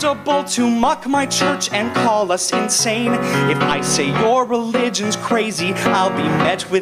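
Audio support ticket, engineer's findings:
No faults found on listening; signal path behaves as expected throughout, nothing to attribute to capture, processing or transport.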